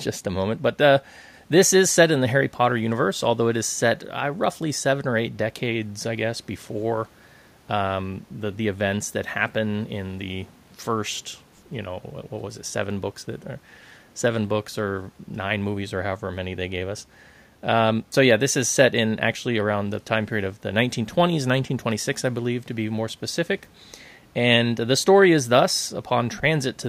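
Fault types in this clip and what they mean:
No technical faults can be heard anywhere in the speech recording; the signal stays continuous and stable throughout.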